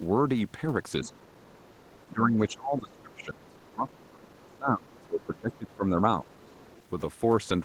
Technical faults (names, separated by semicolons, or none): speech suppressed in double talk; other side's voice leaking through